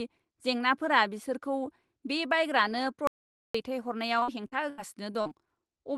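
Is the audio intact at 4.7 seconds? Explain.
No. At 4.7 seconds the speech sits inside a burst of repeated packet loss running from 4.19 to 5.33 s: seven gaps, the longest 79 ms, each patched by stretching the previous sound. It comes out choppy and robotic, and a spectrogram shows smeared, repeated frames between abrupt breaks.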